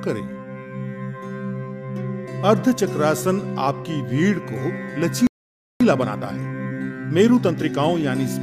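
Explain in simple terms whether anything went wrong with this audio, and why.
At 5.27 s the sound cuts to silence for about half a second, resuming at 5.81 s. This playback stall likely came from the player briefly running out of data.

From 5.81 s to 7.95 s the audio sounds rushed, about 1.25 times normal speed, but with unchanged pitch. This time-compressed catch-up trims tiny pieces to recover lost time.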